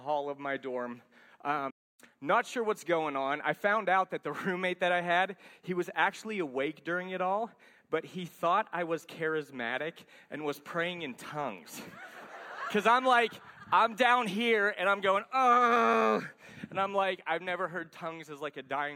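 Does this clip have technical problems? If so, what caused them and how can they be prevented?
Yes. A playback stall at 1.70–2.00 s silences the sound mid-flow for about 290 ms, likely because the player ran short of buffered data or its thread was blocked. Larger playback buffers and keeping blocking work off the audio thread would prevent it.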